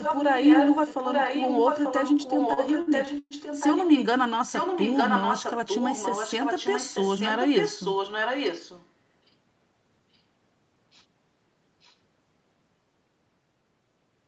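From 0.0 to 4.06 s a far-end echo canceller likely failed to remove its loudspeaker's sound from its microphone, and the leftover was sent back. The result is an echo leak: a second copy of the speech trailing the original by 890 ms and only a little quieter. The same echo returns at nearly that level from 4.46 to 8.89 s, and again very faintly from 11.81 to 11.95 s.

Inside the first echo stretch, from 2.53 to 3.34 s, packets arrived late or too slowly for playback, so the jitter buffer emptied five times. Each time the receiver stretched the last sound to cover the gap, filling 229 ms in all, with the longest gap 119 ms. That is about 29% of the stretch, and nothing is lost. These repeated stalls (stutter) make the speech drag and hiccup, with short sustained fragments where it held.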